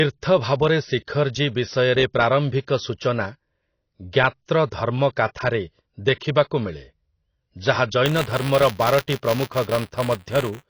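From the start, the speech sounds dull and smeared, with a plainly audible warbling, fizzy texture on sustained sounds and sibilants. This is likely AAC compression, with AAC-LC at a low bitrate near 24 kbps cutting the top band and coarsely quantising what remains.

At 8.05 s a steady robotic buzz at 200 Hz appears under the speech and lasts to the end. This is buffer tearing. The writer and the hardware reader have slipped, so a small sliver of each buffer replays audio from roughly 20 ms earlier, with hard joins on both sides.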